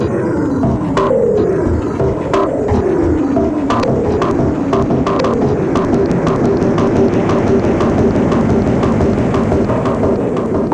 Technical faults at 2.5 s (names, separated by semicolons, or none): none